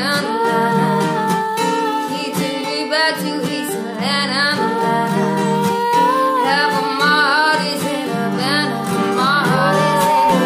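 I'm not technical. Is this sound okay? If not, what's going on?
No. Near the end, a microphone started picking up the loudspeaker it was feeding, creating a loudspeaker feedback squeal. From 9.28 to 10.43 s a single 910 Hz tone swells over roughly a second into a piercing whistle that ends up louder than the rest of the sound.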